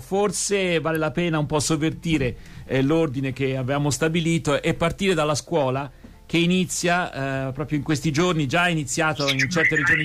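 At 0.95 s a single sharp snap sits on top of the sound, peaking around -20 dBFS. It is likely an electrical switching spike from nearby equipment.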